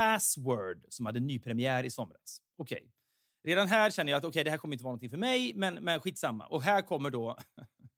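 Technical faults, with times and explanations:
No technical faults are audible in this speech recording.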